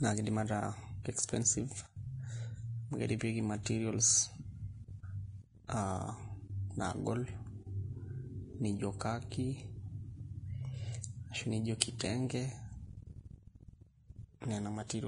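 A speech recording with heavy lossy-codec damage throughout, likely Vorbis compression at a low bitrate near 28 kbps: nothing survives above 10.6 kHz, and the remaining treble is grainy and hissy. On a spectrogram this shows as a hard ceiling with speckled, noisy upper bands. Pre-echo smears four attacks, at 3.63–3.66 s, 8.99–9.01 s, 11.80 s and 11.99 s. Codec noise spread across each transform block leaks up to 30 ms ahead of the onset. On the waveform this appears as a short fuzz just before each sharp rise.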